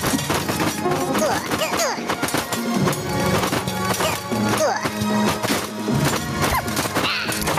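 From start to finish the level pumps, swinging by something like 15 dB. Loud and quiet passages sit unnaturally close together and everything sounds squashed. This is gain pumping, and the likely cause is input gain set far too high for the microphone, with a fast limiter or compressor clamping down on each loud sound and then releasing in the pauses.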